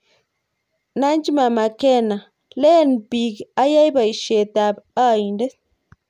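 Nothing here jumps out as a technical fault, so there's no problem to point to anywhere in the recording.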